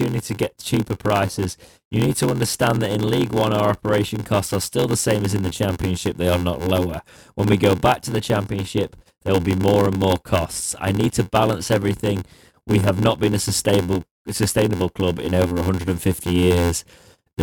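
Throughout, an 86.1 Hz buzz and speech slowed to 0.861 speed with timbre intact: block size mismatch (padded), short blocks zero-filled, fitting 512-sample reads.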